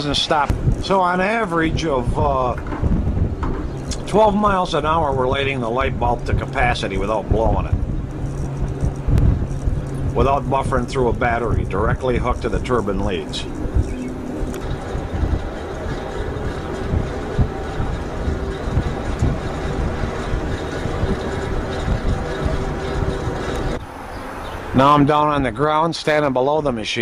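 At 3.08 to 3.18 s, 9.18 to 9.28 s, 15.28 to 15.38 s and 21.38 to 21.48 s, a 100 ms stretch of audio plays twice, the signature of overlapping chunks. The audio was handled in 6 s blocks, and each new block begins 100 ms before the previous one finished, so the tail of one block is heard again at the start of the next. Each join produces a brief stutter, repeating at a steady interval of roughly 6.1 s.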